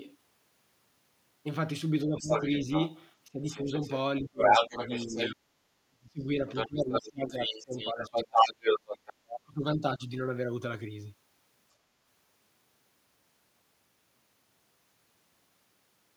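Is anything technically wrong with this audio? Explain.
Yes. Speech suppressed in double talk: from 2.04 to 2.66 s, 3.29 to 8.58 s and 9.13 to 10.11 s the talker's level dips, by up to about 20, 35 and 40 dB. The echo canceller, likely unable to separate local talk from loudspeaker echo during simultaneous speech, turned both down.

The other side's voice is leaking through from 2.2 to 5.35 s and 6.55 to 9.13 s, sitting roughly 5 dB above the talker. The echo canceller likely left part of the far-end loudspeaker signal in the microphone pickup.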